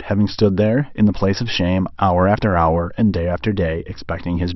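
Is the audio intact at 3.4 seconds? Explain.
Yes, at 3.4 seconds the audio is intact, with no dropout, click, distortion or other fault audible at that point.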